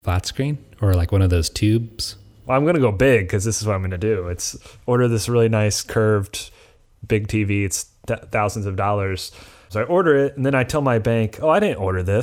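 At 4.53 s, between "I'm going to do" and "order this really nice", the speech has a repeated buffer. New audio arrived late, so the device played its last block of about 1.45 ms one extra time, which fits a 64-sample buffer. That piece is so short that the repeat is heard as a single hard click rather than a stutter. Unlike a dropout, nothing goes silent and essentially no audio is lost. The sound is briefly duplicated, not missing.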